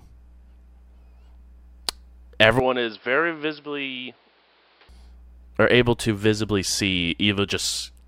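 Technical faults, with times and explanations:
2.60–4.89 s, input switched to a poorer device: The speech turns dull and narrow, with nothing above 5.4 kHz. Level drops around 5 dB, and new background noise appears roughly 30 dB down. There is no gap. A lower-grade microphone likely took over, then full clarity returns.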